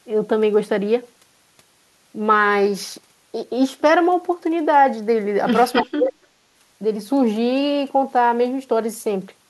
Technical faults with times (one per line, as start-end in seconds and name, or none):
5.73-5.83 echo leak
5.82-6.24 speech suppressed in double talk